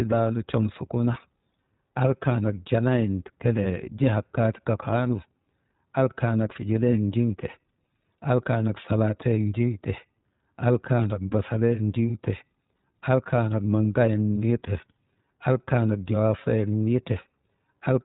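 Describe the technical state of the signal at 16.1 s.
At 16.1 s the speech is dull and slightly rough with a synthetic, buzzy edge, and nothing above 4 kHz comes through. This is iLBC codec damage running through the whole clip: each 20 ms frame's excitation is coded on its own, which fits a rate near 15.2 kbps.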